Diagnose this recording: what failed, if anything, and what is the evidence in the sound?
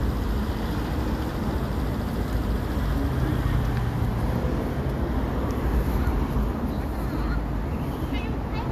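No fault is audible here.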